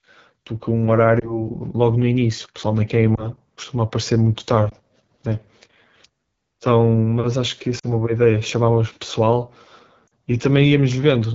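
AMR wideband (HD Voice) codec, throughout: the speech sounds rough and raspy, which fits one of the lowest AMR-WB rates, about 8.85 kbit/s.

Lost AMR speech frames, at 1.20–1.48, 3.16–3.30, 4.70–4.73, 7.79–7.87 and 10.08–10.11 s: the decoder bridges each gap by repeating the previous pitch and vocal tract settings at fading gain, giving brief dips or warbles. The first three sound like single lost frames, the last two like short runs.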